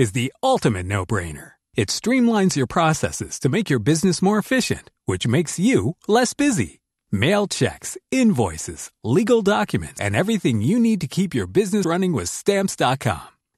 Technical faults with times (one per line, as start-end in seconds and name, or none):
9.98 compressed frames skipped
11.84 compressed frames skipped